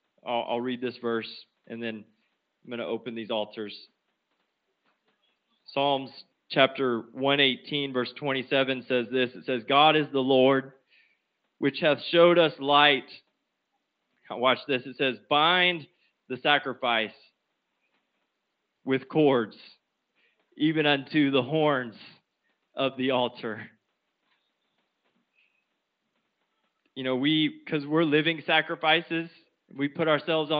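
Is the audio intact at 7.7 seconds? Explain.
Yes, the audio is intact at 7.7 seconds, with no fault at that moment.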